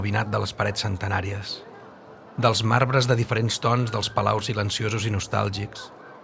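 No dropouts, clicks, distortion or level problems are audible anywhere in the clip.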